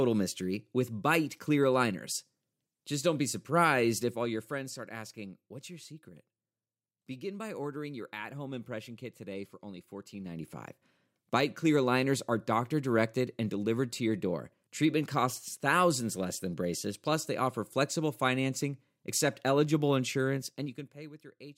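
Zipper noise shows up three times in this speech clip. From 3.98 to 4.77 s the level drops by around 10 dB. Right after "kit today for only", 10.12 to 10.53 s, it climbs back about the same amount. After "flexible financing accept eligible", 20.34 to 21.26 s, it falls by roughly 20 dB. Each move is made of unsmoothed 2 dB jumps, about 10 to 20 per second, so you hear a ticking zip riding on the voice.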